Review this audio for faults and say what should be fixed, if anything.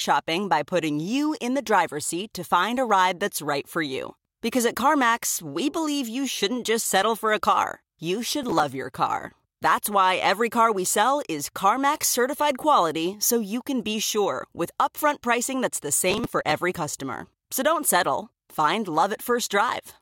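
Processor overload crackle occurs from 8.43 to 8.63 s, between "car you" and "your car", and again from 16.11 to 16.75 s after "upfront pricing that's the". In both spots, many consecutive buffer deadlines were missed. The grain of the gaps fits short buffers of around 5 ms, each one skipped and leaving a hard-edged hole. Unlike a single dropout, this is a gritty run of many tiny gaps that stops once the load eases. Enlarging the buffer or reducing processing load during playback or recording would prevent it.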